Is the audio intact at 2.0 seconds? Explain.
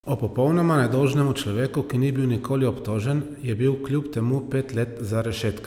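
Yes, at 2.0 seconds the speech runs intact, with no audible fault at that moment.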